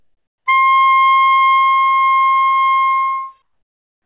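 From 0.00 to 0.46 s, and again from 3.42 s to the end at 4.05 s, the quiet background drops out and is replaced by a flat, featureless hiss, about 14 dB and then about 16 dB lower than the real ambience it covers, which sits about 49 dB below the loud parts. This is comfort noise in place of the background, likely from discontinuous transmission: the sender stopped sending during the lulls, and the receiver filled the gaps with synthetic noise, heard here within the call path's 4 kHz bandwidth.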